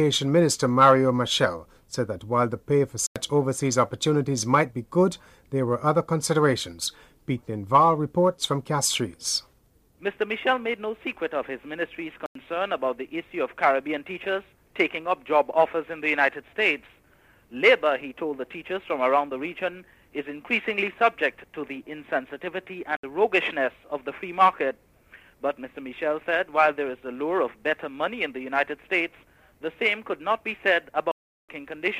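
There are four blocks of digital silence: 3.07 to 3.16 s, 12.26 to 12.35 s, 22.97 to 23.03 s, and a longer one from 31.12 to 31.49 s. The output buffer likely wasn't filled in time, so the sound drops straight to silence and back. The 93 ms holes fit a 4096-sample buffer.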